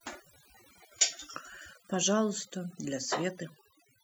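Overdone noise removal runs through the whole speech clip. A noise reduction stage was set too strong. It pulls individual frequency bands down hard wherever they sit near its noise estimate. Quiet parts of the voice vanish too. Gaps fall to near silence with twinkling specks.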